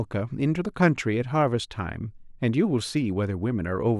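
From about 0.1 s right through to 3.98 s there's a fine, steady rattle of clock slip clicks, well over a hundred tiny ticks arriving roughly every 30 ms and riding on top of the speech wherever it's loud. Each one is a single sample being dropped or doubled, most likely because two devices were running on separate clocks with nothing locking them together, drifting apart by something like 700 ppm.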